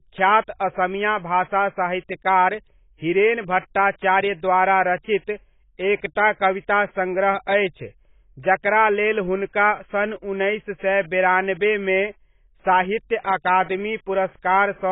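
Throughout, the speech sounds dull and smeared, with a warbling, fizzy texture on sibilants. The likely cause is heavy AAC compression at a very low bitrate, around 16 kbps. A spectrogram shows a hard ceiling at 3.8 kHz.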